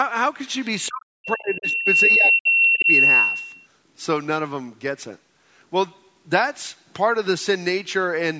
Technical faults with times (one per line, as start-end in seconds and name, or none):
0.67-3.67 loudspeaker feedback squeal
0.88-2.89 speech suppressed in double talk
2.13-2.19 other side's voice leaking through